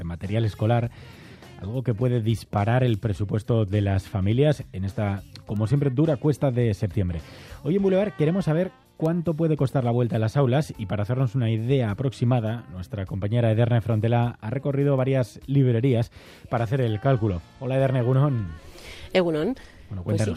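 At 12.86 s the audio stream has likely dropped samples, perhaps a single one, less than a thousandth of a second of signal lost. Far too little is missing to take away any sound. Instead the waveform jumps straight from one value to a later one, and that sudden step is heard as one sharp, isolated click, which would appear as a thin vertical line across the spectrum.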